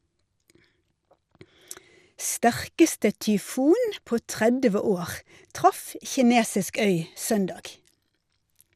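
From start to finish the speech sounds dull, with a gurgling, grainy edge that's plainly audible, and nothing at all comes through above 15.1 kHz. That's most likely MP2 compression: Layer II splits the sound into sub-bands and, when it runs short of bits, shuts off the top ones and coarsely quantises what's left, so bands flicker in and out. The damage level fits a low bitrate of around 80 kbps.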